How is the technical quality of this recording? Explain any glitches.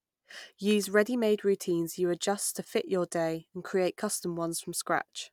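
Nothing stood out as a technical problem on listening to this speech recording.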